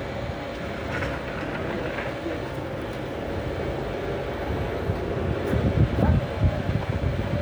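Compressed frames were skipped near the end of this everyday-sound recording: at 6.91 s a couple of frames never reached playback, so the audio jumps forward by roughly 50 ms.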